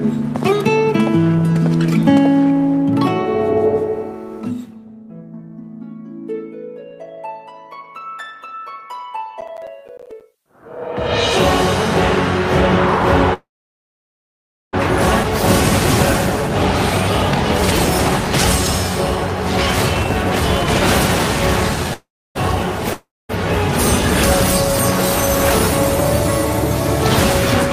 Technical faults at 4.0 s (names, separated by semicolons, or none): none